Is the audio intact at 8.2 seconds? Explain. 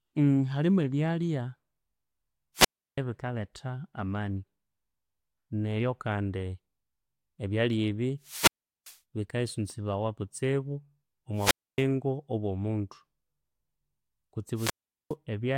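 No. A wireless microphone squelch dropout runs from 8.21 to 8.99 s. The radio signal fades, hiss rises, then the receiver's squelch mutes the output for about 0.39 s. The speech resumes with "bikaisunzibawa kutsibu".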